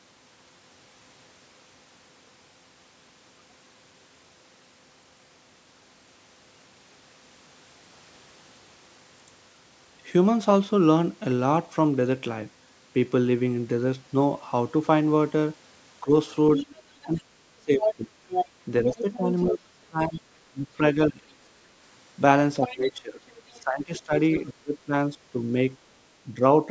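From 16.01 s the talker's level dips in bursts. This is speech suppressed in double talk, at 16.01–16.11, 17.04–18.16, 18.83–21.24, 22.58–25.56 and 26.24–26.42 s. The likely cause is that the echo canceller could not separate the near talker from loudspeaker echo and attenuated both. Drops run from about 10 dB to as much as about 40 dB. On the waveform they appear as abrupt notches, and on the spectrogram as faded or blank stretches.

Interleaved with these, the other side's voice leaking through occurs at 16.55–17.2, 17.8–19.55 and 22.62–24.5 s. This is likely residual echo the canceller failed to remove. It ranges from well below the talker to roughly equal level. On the spectrogram it shows as a second harmonic pattern overlapping the main speech, all within the band that stops at 8 kHz.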